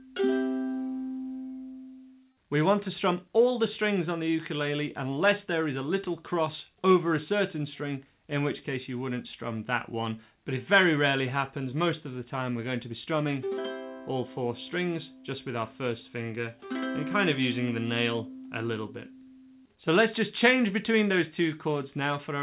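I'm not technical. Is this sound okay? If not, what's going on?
Yes, no faults here; the sound came through a normal phone-style call link, which carries nothing above 4 kHz, so the top end is missing as expected for that kind of line.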